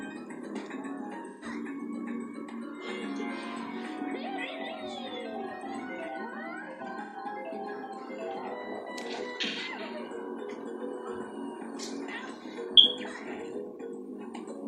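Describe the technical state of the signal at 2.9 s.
At 2.9 s the signal is intact, with no dropout, distortion, glitch or other technical fault audible at that point.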